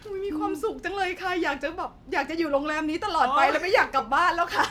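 Sample clock jitter runs from 1.04 s to the end at 4.70 s: the converter's clock wanders by around a microsecond, shifting each sample's timing, so a hiss roughly 40 dB below the speech rides on it, rougher on loud, bright sounds and gone in pauses.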